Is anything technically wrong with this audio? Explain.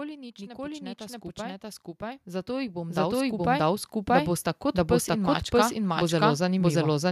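Yes, two faults. A doubled audio track runs throughout: an identical full-band copy trails about 0.7 s behind at roughly equal level, with no decay, likely from a second, slower capture path. Automatic gain rising from 0.38 to 7.06 s: the gain control judged the input too quiet and steadily raised it by about 19 dB, so speech and background swell together.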